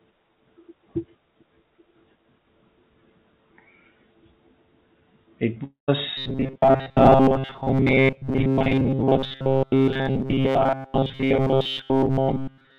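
A speech clip heard through a call connection, band-limited with nothing above 4 kHz, which fits a narrowband G.711 codec. At 5.64 s there is a long network dropout. It lasts until 5.90 s. The last sound is stretched into a fading buzz or hiss. About 130 ms of near-silence follows. Roughly a quarter of a second of speech is lost, and the sound resumes past the gap. This is likely lost packets that never arrived. From 6.17 s to the end, the speech turns robotic. A rigid metallic buzz at 134 Hz sits on top of it. That pitch fits a short buffer of about 7.5 ms being repeated. Most of the real audio in this stretch is skipped. The words are only roughly followed. This points to robotic sound from repeated short buffers, with audio arriving too seldom.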